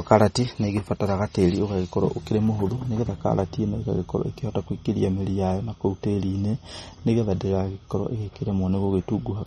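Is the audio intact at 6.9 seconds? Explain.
No, at 6.9 seconds the speech has the same damage it carries for the whole clip. Nothing comes through above 12.3 kHz, and the sound is watery and swirly, with smeared attacks and metallic chirps on s sounds. That's likely MP3 compression at a low bitrate, around 32 kbps. The encoder runs short of bits, cuts the treble at a fixed point, and zeroes quiet frequency lines that then flicker on and off from frame to frame.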